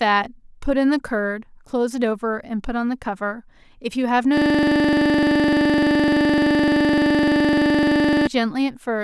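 From 4.37 to 8.27 s, a system hang loop repeats one 42.67 ms slice of speech at 23.4 Hz, which fits a 1024-sample buffer, giving a buzzing stutter. The waveform shows identical repeating blocks, and the spectrogram shows evenly spaced vertical stripes.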